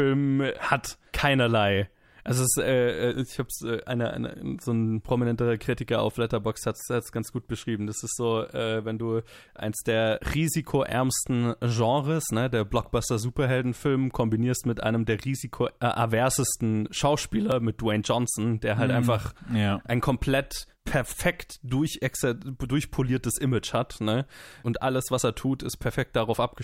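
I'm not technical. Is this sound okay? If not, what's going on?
No. At 17.52 s there's a repeated buffer. New audio arrived late, so the playback device replayed its last tiny chunk, about 1.5 ms long, which fits a 64-sample buffer. Because the repeated piece is so short, it comes across as a single quick click.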